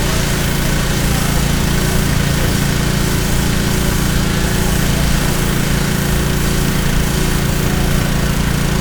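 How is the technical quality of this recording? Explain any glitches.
The technical quality of the recording is sound, with no glitches to explain.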